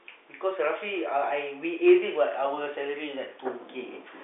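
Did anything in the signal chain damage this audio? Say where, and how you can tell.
No, the speech carries the narrow telephone band of G.711 coding, with energy from roughly 300 Hz to 3.6 kHz and nothing above about 3.8 kHz, which fits a 64 kbps A-law line working as intended.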